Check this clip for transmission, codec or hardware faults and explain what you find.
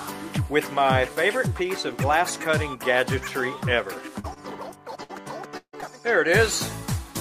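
Several faults from lost network packets fall in the last three seconds of the clip, all between 4.19 s and 5.84 s, running from brief repairs to a stretch where sound actually drops out.

Short concealed packet loss occurs at 4.19–4.38 s, again inside that at 4.33–4.38 s, and at 5.81–5.84 s. About 20 to 40 ms failed to arrive each time, and the receiver extended the preceding sound before blending back. Each is heard as a quick smear or wobble, too short to fade like a burst.

A burst of packet loss runs from 5.03 to 5.11 s. About 60 ms in a row went missing, and the receiver continued the last sound while turning it down. That gives a held buzz or fading hiss before the audio resumes further on without the skipped part.

A long network dropout, from 5.57 to 5.75 s, is likely the cause of the longest gap. About 160 ms is lost. The extended sound fades out and roughly 80 ms of near-silence follows before audio returns. 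Unlike the burst, it reaches actual silence.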